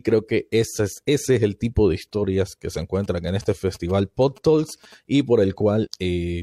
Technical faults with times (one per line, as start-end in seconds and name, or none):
2.81-4.94 GSM signalling bursts
5.81-5.88 damaged data in a compressed stream